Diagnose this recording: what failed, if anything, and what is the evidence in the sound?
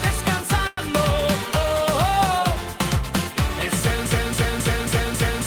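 At 0.67 s the network path delivered a packet late and the jitter buffer ran dry, giving a short stall from a late packet. Until about 0.79 s the receiver holds the last sound for 100 ms, a drawn-out stretch with a slight buzz or dip, then resumes exactly where it stopped. Nothing is skipped, so the rest of the clip plays about 100 ms later. That sets it apart from a dropout or concealed packet loss, where audio is actually gone.

From 4.06 s to the end of the clip, a 0.27 s fragment repeats exactly, back to back, as a broken-record loop. The repeats are identical and never advance, so whatever should have followed is lost. That distinguishes it from a jitter-buffer stall, which holds one sound and then resumes where it stopped. Here the playback or stream stage likely froze and kept resending the last block it held.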